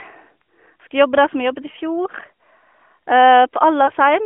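At 1.72 to 1.76 s and again at 3.86 to 3.92 s the speech shows lost AMR speech frames. Each gap matches a single 20 ms frame that failed its checksum, so the decoder filled it by repeating the previous pitch and vocal tract settings at reduced gain. Each one is a brief dip or warble before the speech resumes. The surrounding narrowband AMR audio, limited to about 250 Hz to 3.4 kHz, carries only light coding texture.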